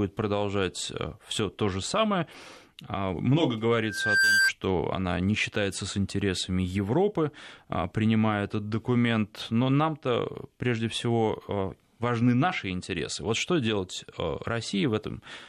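At 3.8 s, just after "а много", a loudspeaker feedback squeal starts: the microphone is hearing the loudspeaker it drives, and at 1.6 kHz the loop gain has gone past one, so that tone feeds on itself. It swells over a fraction of a second to a few decibels above the speech, then stops at 4.52 s, before "она не считается с". Unlike a steady interference whistle, it rises from nothing and grows instead of sitting at a fixed level.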